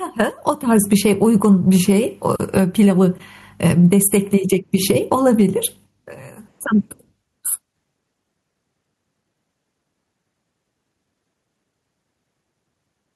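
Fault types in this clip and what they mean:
Gain pumping: The input gain was likely set far too high for the microphone, leaving a fast limiter or compressor to drag the level down every time the speech gets loud. Throughout the clip the gain swings by around 10 dB. Loud and quiet passages end up squeezed close together in level, so the speech sounds flattened and squashed.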